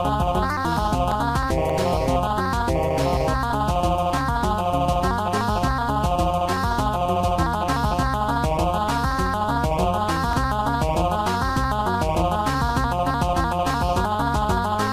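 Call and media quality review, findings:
Abrupt forward skips, no gap, at 0.77, 1.70, 3.53, 5.78, 10.33, 14.05 s, each losing roughly 20 to 70 ms. Likely dropped buffer (overrun): capture samples overwritten before being read.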